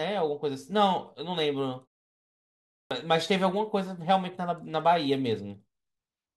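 A speech clip with a clipped start after a pause: at 2.79 s, after a silence of about 1 s, the sound resumes abruptly, with its first 118 ms missing up to 2.91 s. The output device drops into a sleep state during the quiet stretch and needs that time to wake before audio passes again. Muted pauses, which can sound similar, would only silence the gap and bring the sound back whole; here the onset itself is lost.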